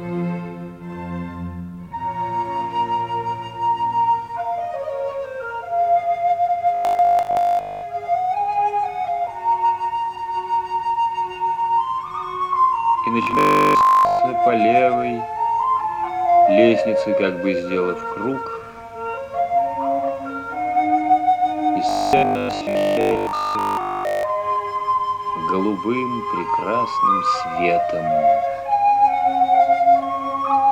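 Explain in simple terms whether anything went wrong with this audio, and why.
At 6.75 to 7.87 s, 13.23 to 14.19 s and 21.89 to 24.23 s, the sound turns into a stiff, metallic 50 Hz buzz. This is robotic sound from repeated short buffers. New audio likely arrived too slowly, so a 20 ms slice was replayed over most of each stretch, and all of the middle one.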